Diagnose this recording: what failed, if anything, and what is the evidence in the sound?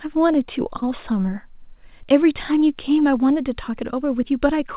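Short concealed packet loss at 0.78 to 0.84 s, a network-stage fault in the call path. About 40 ms of the signal failed to reach the decoder in time, and the receiver's concealment filled roughly 36 ms of that gap by extending the preceding speech, repeating its pitch where voiced or substituting shaped noise where not, before crossfading back into the real stream. The result is a brief smear or wobble there. The band limit near 4 kHz fits a narrowband telephone codec.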